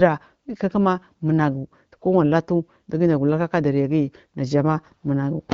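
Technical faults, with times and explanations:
No technical faults can be heard in this speech clip. It has passed through the AMR wideband (HD Voice) codec at 12.65 kbit/s, which leaves the speech clear with only light coding traces and a top end that stops near 7 kHz.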